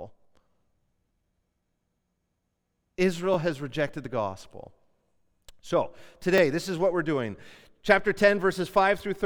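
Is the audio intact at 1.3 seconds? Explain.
Yes, the speech at 1.3 seconds is intact, with no dropout, glitch, or other fault at that point.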